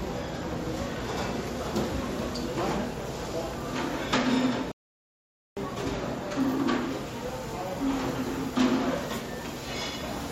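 A rebuffering stall hits this sound clip: playback ran out of buffered audio at 4.72 s, going silent until 5.57 s, then resuming seamlessly, adding 0.85 s.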